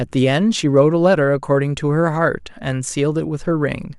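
Speech recording with no audible technical faults anywhere.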